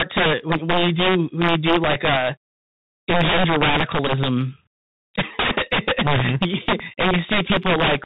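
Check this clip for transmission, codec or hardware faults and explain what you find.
Yes, three faults are present: integer overflow and CVSD codec damage throughout, and Bluetooth headset packet repeats in two places.

Integer overflow runs through the whole clip. The signal is driven about 12 dB past full scale, and roughly one sample in twenty wraps to the opposite sign instead of being limited. Loud syllables therefore produce violent cracks that are far harsher than clipping's flattened peaks.

The Bluetooth CVSD headset codec is also present throughout and plainly audible. Its one-bit up/down stepping, consistent with a 64 kbit/s stream, cuts everything above 4 kHz, makes s sounds scratchy and leaves a granular hiss. That hiss and step-overload grit set it apart from other narrowband codecs.

Bluetooth headset packet repeated occurs at 4.07 to 4.10 s, where about 15 ms is lost. It occurs again at 7.46 to 7.51 s, where about 26 ms is lost across 45 ms, with the longest run about 7 ms. 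Lost packets were re-decoded from the previous packet's bits, so a run of repeats every 3.75 ms makes a buzz near 267 Hz. This fills the gap with buzz rather than the silence of a plain dropout.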